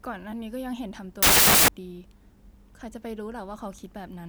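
Speech clip with one fault: from 1.23 to 1.68 s the samples are built from the wrong bytes, misassembled or byte-swapped, turning low bits into loud, harsh broadband noise.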